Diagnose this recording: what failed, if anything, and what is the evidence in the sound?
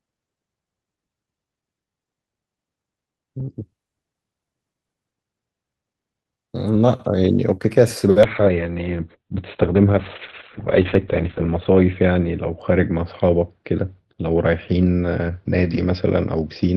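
A call bitrate drop hit the codec stage from 8.27 s to the end: the speech turns coarse and muffled, band-limited to 4 kHz, consistent with roughly 7 kbps. Unlike packet loss, it degrades continuously without gaps.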